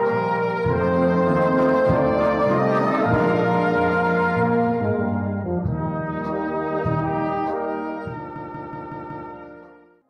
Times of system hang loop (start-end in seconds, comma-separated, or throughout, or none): 8.36-9.29